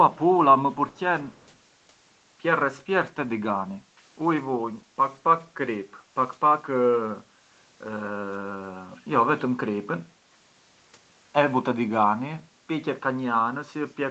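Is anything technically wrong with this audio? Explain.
Yes, there is one brief fault: an echo leak between 0.92 and 1.0 s. The likely cause is a loudspeaker on the far end of the call whose echo canceller let part of the microphone pickup through, so that signal travelled back down the line. It is heard as a very faint, delayed copy of the speech, about 191 ms behind, a short ghostly scrap sitting under the audio, which is band-limited to 8 kHz by the call path.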